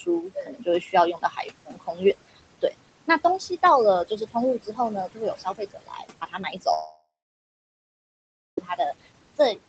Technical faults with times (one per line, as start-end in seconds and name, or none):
0.00-9.68 noise suppressor artifacts
0.00-2.74 speech cut by the noise suppressor
4.05-4.79 speech cut by the noise suppressor
5.14-9.58 speech cut by the noise suppressor
6.73-8.58 long network dropout